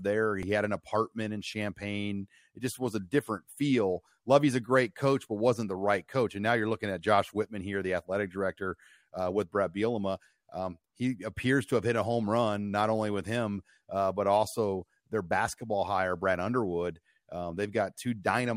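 An underrun with held sample at 0.43 s interrupts this speech clip just before "had an apartment in". The output buffer emptied, so the converter froze on its last value for 2.67 ms, a gap of 128 samples. Roughly 3 ms of live audio was lost.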